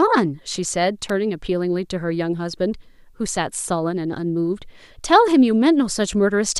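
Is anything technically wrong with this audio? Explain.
Yes. At 1.09 s in this speech clip there is an electrical switching spike. It is a sharp snap lasting only a few milliseconds, peaking around -15 dBFS. It is likely an arc from a nearby switch or motor, picked up by the audio line and layered over the speech.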